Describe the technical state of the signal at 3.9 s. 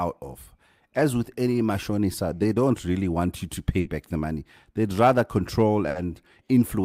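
A burst of packet loss from 3.79 to 3.88 s left the receiver extending and fading the last sound, a brief buzz or hiss, before resuming with about 60 ms missing.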